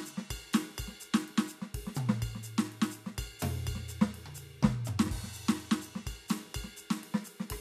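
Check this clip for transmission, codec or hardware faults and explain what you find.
Nothing to report on this music clip: no faults found.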